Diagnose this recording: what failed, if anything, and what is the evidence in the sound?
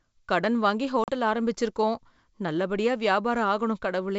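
Packet loss on an ADPCM call, at the network stage. At 1.04 s the speech drops to a hard-edged silence of about 40 ms, a gap that fits a couple of lost packets. When audio resumes, the decoder's adaptive predictor and step size no longer match the sender's, so the speech comes back slightly distorted. It settles by about 1.12 s. The G.722 wideband coding at 64 kbit/s carries the sound with clear high-frequency content.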